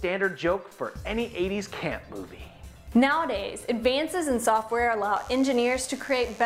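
From 5.16 s to the end at 6.45 s there's mains buzz. Sharp switching spikes are leaking in twice per 50 Hz cycle and throwing harmonics up into the kilohertz range. You get a steady, raspy buzz sitting roughly 25 dB below the sound.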